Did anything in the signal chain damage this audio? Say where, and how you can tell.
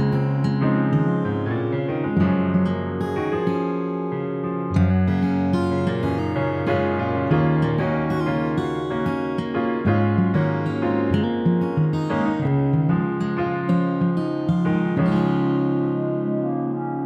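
No, nothing in the signal chain damaged this audio. No stage, from capture through to playback, left any audible trace.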